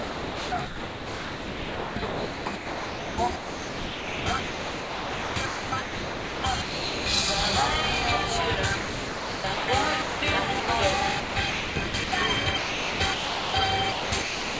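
From 0.00 to 7.06 s, then 8.76 to 9.68 s, the everyday sound is chopped by the voice detector, likely the sender's VAD gating repeatedly: about 6 s, then 0.82 s, become flat comfort noise, seen as smooth, featureless bands between real bursts. At 10.02 to 10.22 s and 10.60 to 10.68 s the sound is dropped by the voice detector, likely misjudged as background: 200 ms and 80 ms gaps of steady noise, showing as short, uniform patches in the waveform. Chopping returns at 11.20 to 12.12, 12.58 to 13.54 and 13.92 to 14.59 s. Throughout, nothing appears above 8 kHz, which fits a G.722 call path.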